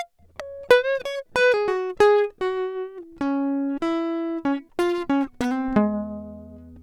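The music runs without any audible technical fault at any point in the recording.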